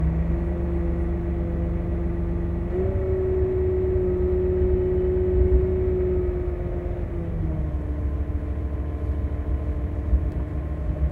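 No technical faults can be heard anywhere in this recording of sounds.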